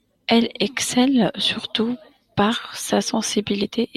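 At 1.63 s and 3.63 s, compressed frames are skipped, about one then two 20 ms frames. The speech jumps ahead, visible as a thin spectrogram seam.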